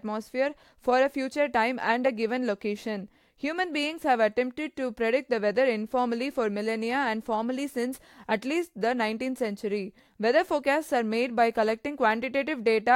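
No technical faults can be heard anywhere in this speech recording. Nothing in the audio stands out as a fault at any point.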